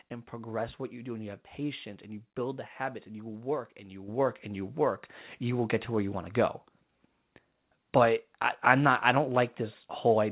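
This speech clip has a microphone volume step-up at 4.08 s. It falls just after "you work and you" and before "and you work you". Voice and background rise together by about 7 dB at once. Call software raised the input gain in a single jump. The audio also stops at 4 kHz, which fits a narrowband G.711 call path.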